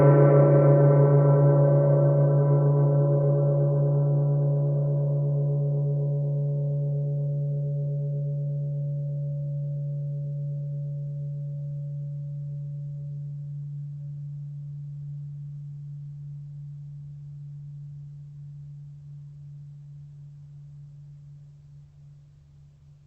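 Music over a call link whose codec rolls off the top end at around 8 kHz, consistent with an Opus connection, with no faults to report.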